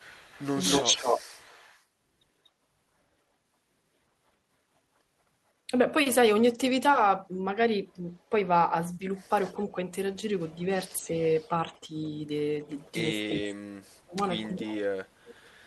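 Speech recording with echo leak, a delayed copy of the speech at 0.00–1.83 s (241 ms, about as loud as the speech), 7.92–8.23 s (241 ms, very faint), 9.46–12.91 s (305 ms, faint) and 14.50–15.35 s (305 ms, more audible), likely from a loudspeaker echo canceller leaving residue. From 9.52 s to the end, speech suppressed in double talk dips the talker by up to roughly 40 dB, likely as the canceller turns down both its own talker and the loudspeaker echo.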